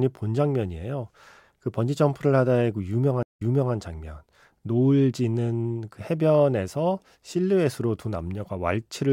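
At 3.23 s a stream reconnect interrupts the speech. The connection dropped, leaving a 149 ms flat gap in the waveform. A fresh decoder then fades in, replaying material from 0.37 s earlier, so the spectrogram repeats a stretch before 3.74 s.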